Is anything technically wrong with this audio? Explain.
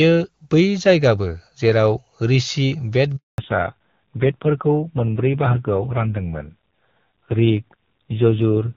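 Yes, there are two faults. Handover gap, 3.16 to 3.38 s: the call switched networks and no speech frames arrived, so the sound cuts out for 220 ms before resuming. Fallback to narrowband, from 3.38 s to the end: the clear AMR-WB HD Voice sound gives way to an older narrowband codec, which fits a low rate around 5.9 kbit/s. Nothing above 4 kHz remains, and the speech turns duller and rougher.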